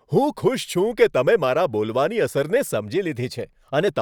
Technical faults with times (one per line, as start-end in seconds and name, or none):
2.56-3.88 drift correction step